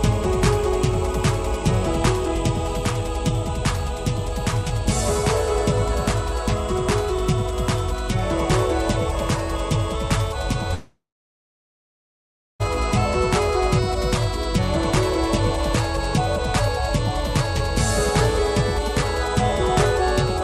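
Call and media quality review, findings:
Long network dropout, 10.74–12.62 s. Stream likely stalled in transit. Receiver concealment stretches the last sound into a fading buzz or hiss, then about 1.58 s of silence. Playback resumes at 12.62 s with 1.86 s of audio lost.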